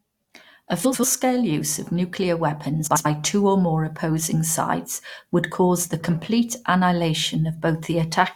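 Speech with frames out of order at 0.84–1.04 s and 2.86–3.06 s: two adjacent runs of about 93 ms each, which fits four frames apiece, play swapped, giving a garbled flutter. Unlike a dropout or repeat, no time is lost.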